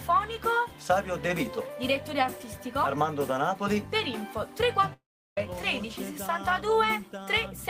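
At 4.93 s the sound breaks off for about 0.44 s, to 5.38 s. The last bit smears into a fading buzz, then it's mostly dead silence until the audio picks up again with that chunk gone. Likely a long network dropout.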